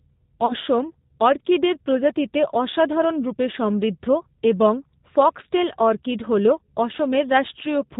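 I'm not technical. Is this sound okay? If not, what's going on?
No. Two problems can be heard in this speech recording.

Throughout, the sound carries the signature of the G.729 codec, a low-data phone-call format. It doesn't send the voice directly. It sends a rough description of the mouth and throat shape and the pitch, and the far end rebuilds the voice from that. All the higher frequencies above 4 kHz are thrown away. The result here is plainly audible: the voice is clear enough to follow but sounds dull, slightly rough and a little artificial.

Near the start, from about 0.46 to 0.54 s, there is VoIP packet loss concealed by the speech codec. About 30 ms of audio never arrived, which points to a single lost packet. The decoder filled the gap by stretching out the last bit of voice it had and letting it fade, giving a short smear. Because each piece of the rebuilt voice depends on the one before, the sound stays weak or distorted for a moment after the gap.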